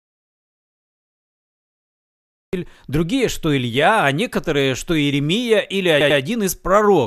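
The clip opens in an audio dropout to silence that is already under way. From 0.0 to 2.53 s there is nothing at all, not even room tone. Sound returns abruptly at "другие что". The input was likely lost, perhaps from a disconnected device, a failed link or a stray mute, while recording carried on writing silence. Any speech from that stretch is gone, and the sudden entry sounds cut rather than faded in.

At 6.00 s come repeated frames, running to 6.19 s. A short block of about 96 ms plays again twice more. That fits a small run of compressed frames being written or sent more than once. It is heard as a quick stutter. The repeats stretch the speech by 192 ms.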